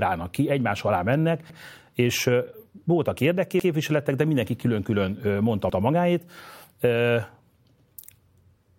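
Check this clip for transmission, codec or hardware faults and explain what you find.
A fault is present: overlapping chunks, heard as three short stutters in the speech at 3.6, 5.7 and 7.8 s. Each time, a piece of about 100 ms plays twice, giving a brief catch or click, and they recur every 2.1 s. The audio was handled in 2-second chunks, and each chunk began 100 ms before the previous one ended, so that sliver is duplicated at every join.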